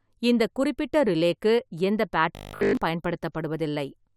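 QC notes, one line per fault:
2.35 to 2.77 s, robotic sound from repeated short buffers: the speech turns into a stiff metallic buzz at 50 Hz, with essentially the whole stretch looped. That's likely a starved stream replaying its last 20 ms chunk over and over while the real audio gets skipped.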